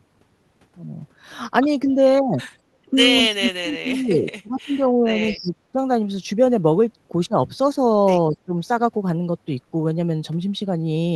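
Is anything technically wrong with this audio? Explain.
Yes. The speech, carried over a call codec whose top end stops near 12 kHz, keeps dropping out in level.

Speech suppressed in double talk occurs at 1.86–1.98, 3.22–4.26, 4.42–4.82, 4.98–5.12, 5.32–5.78 and 8.32–8.56 s. The likely cause is an echo canceller that cannot separate this talker from the far side's loudspeaker echo while both speak, so it turns the near speech down too. The dips at 1.86 s and 4.98 s are shallow. The rest cut deep, by some twenty to thirty decibels, nearly silencing the talker for up to about a second.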